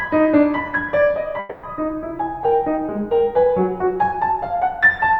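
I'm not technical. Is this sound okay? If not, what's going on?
No. From 1.39 to 1.66 s the music breaks up. For about a quarter second, the last sound is stretched into a fading buzz. Then the music resumes with that piece missing. This is likely a long network dropout, where audio briefly stopped arriving.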